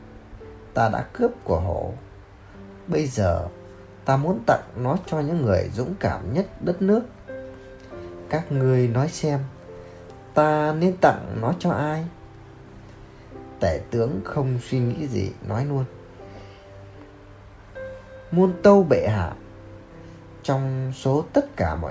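No technical faults can be heard anywhere in the recording. The sound continues without any audible disturbance from beginning to end.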